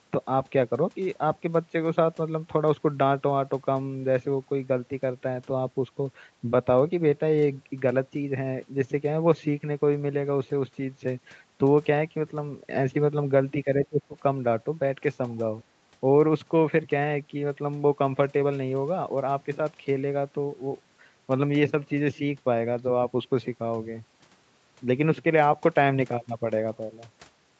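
Between 13.64 and 14.18 s the speech dips sharply, by about 20 dB at its lowest, and breaks into pieces for a little under half a second in all. This is likely speech suppressed in double talk: an echo canceller, faced with both ends talking, mistook this talker for loudspeaker echo and attenuated it. Unlike a packet-loss gap, the sound ducks and dulls unevenly rather than dropping to clean silence or turning robotic.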